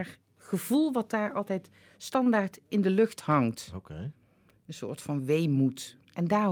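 At 2.23 to 2.29 s one speech sound is held slightly too long with a faint buzz or dip: a short stall from a late packet, stretched about 24 ms, nothing lost.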